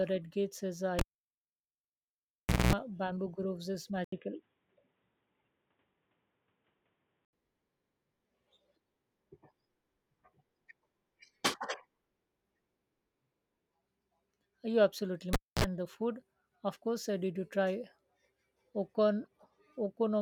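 This speech clip has pops, dropouts and hum in two places. At 0.99 s, just after "red gates is uh", a pop cuts the sound to near silence for 1.69 s, with a 0.21 s burst of 60 Hz buzz before another pop brings back "bamboo groves is" at 2.73 s. The same happens from 15.33 to 15.64 s, before "the food of course": 0.26 s of dropout with 49 ms of buzz. Both are a cable pulled and plugged in while live, with the hum coming from only the tip touching. From 4.04 to 7.33 s, after "bamboo groves is", the sound turns dull and boxy with nothing above 3.8 kHz, an 80 ms silence at the switch, a faint new noise floor roughly 55 dB down, and little change in level. This is likely the input switched to a poorer device with a narrower band and its own background noise. From 19.25 to 19.27 s a brief, faint glitch peaks around -50 dBFS. That is a corrupt frame decoded, with damaged data across a couple of compressed frames putting energy at the wrong frequencies.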